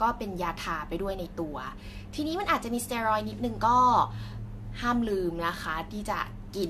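Throughout the speech, the audio was likely re-encoded with a lossy codec about three times, a sound that fits AAC-LC at 64 kbit/s. This generation loss stacks requantisation noise and spectral gaps with each pass, leaving it swirly and hollow, attacks smeared, nothing above 14 kHz.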